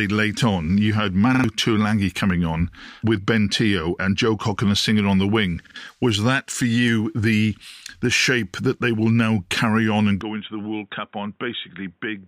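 A speech recording with two kinds of fault. Repeated buffer stutters occur at 1.35 to 1.44 s and again at 5.67 to 5.76 s. Each time a 46 ms piece plays three times with hard joins, which fits a 2048-sample buffer. Roughly a tenth of a second of speech is lost at each stutter. From 10.21 s to the end, the sound turns dull and boxy with no gap. Nothing above 3.8 kHz remains, the level falls about 10 dB, and a new noise floor sits roughly 40 dB below the speech. The likely cause is the input switching to a poorer device.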